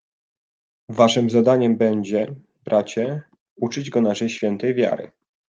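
Listening closely to the speech recording, nothing stood out as a technical fault at any point.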